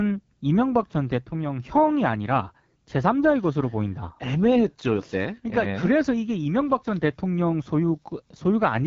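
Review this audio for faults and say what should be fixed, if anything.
Throughout the clip the speech carries AMR wideband (HD Voice) codec damage: a rough, raspy texture that points to one of the lowest rates, around 8.85 kbit/s, where the pulse-driven model strains. A plain low-pass filter would sound smooth; here nothing above 7.4 kHz remains. Encode at 12.65 kbit/s or higher.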